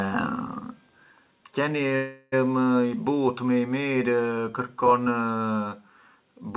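At 1.96 s the speech stalls in a call audio freeze lasting until 2.34 s: about 360 ms filled by the last sound stretched into a fading buzz or hiss, never reaching silence. Likely a packet hold-up draining the jitter buffer, so speech resumes intact but 360 ms late, within the 4 kHz band that fits G.711 mu-law.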